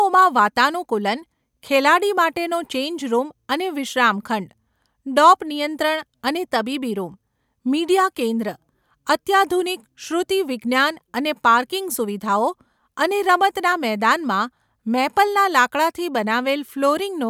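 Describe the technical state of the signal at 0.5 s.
Nothing at 0.5 s points to a technical fault; the speech signal is intact at that moment.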